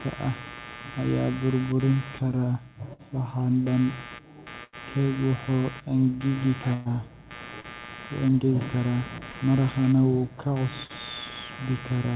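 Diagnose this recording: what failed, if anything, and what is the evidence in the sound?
Computer activity noise runs throughout as a buzz pulsing around a hundred times a second, roughly 15 dB below the speech: computer load changes shifting the shared analogue ground.

Burst of packet loss at 2.93–3.02, 4.64–4.76, 6.74–6.88 and 10.84–10.92 s. The network dropped 60 to 120 ms each time. The receiver stretched and faded the last sound, then skipped ahead.

Short concealed packet loss at 7.60–7.67 and 9.32–9.37 s. About 30 ms arrived too late through the G.711 call path, and the receiver's brief continuation leaves a smear.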